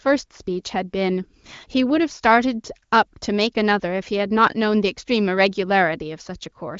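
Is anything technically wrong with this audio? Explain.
No, nothing is technically wrong with this audio, which comes through an AMR wideband (HD Voice) codec at 18.25 kbit/s with nothing above about 7.5 kHz.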